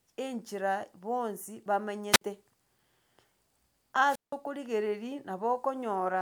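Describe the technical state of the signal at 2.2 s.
At 2.2 s the signal is in a wireless microphone squelch dropout, running from 2.12 to 2.21 s, just after "enchera bonsi". The analogue FM link's RF level sagged below the receiver's squelch threshold, so the receiver gated its output. The sound is a short swell of hiss as the carrier weakens, then a near-silent gap of about 55 ms, after which the speech returns as the carrier recovers.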